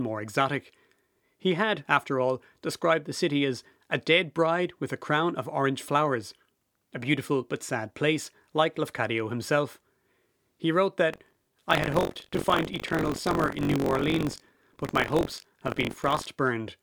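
Speech with buffer tearing from 11.1 s to 16.3 s. A robotic buzz at about 47 Hz rides on the voice, which fits a 1024-sample buffer. Writer and reader have slipped, so roughly a sixth of each buffer replays audio about 40 ms old, with hard joins.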